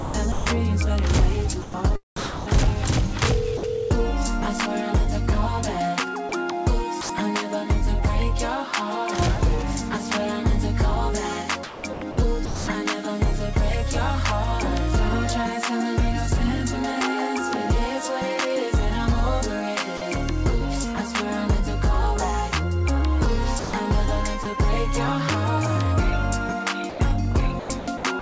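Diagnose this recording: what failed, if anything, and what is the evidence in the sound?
Call processing at the sender's end likely failed, with its voice detector repeatedly toggling transmission on and off. This is sound chopped by the voice detector: across 0.00–0.46 s, 1.62–2.76 s, 6.29–7.09 s, 11.63–12.67 s, 23.59–24.45 s and 26.89–28.22 s, parts of the sound give way to comfort noise, between 100 and 560 ms per stretch. The result is choppy.

In two brief spots, sound is dropped by the voice detector. The sender's detector likely judged the quiet material as background and stopped sending, so the receiver filled in generated noise. At 3.57–3.63 s, 60 ms of sound is replaced, and at 19.97–20.01 s, 40 ms. Each gap is a short hole filled with steady noise before the sound resumes, heard through the G.722 call path's band limit at 8 kHz.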